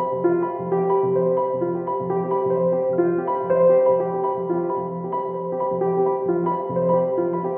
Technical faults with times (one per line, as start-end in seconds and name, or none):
none